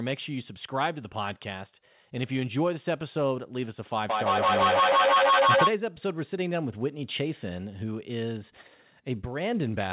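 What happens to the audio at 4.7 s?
Feedback echo between two devices runs from 4.09 to 5.73 s. A second device replays the sound into the microphone roughly every 150 ms. Repeats pile up, peaking about 8 dB above the speech.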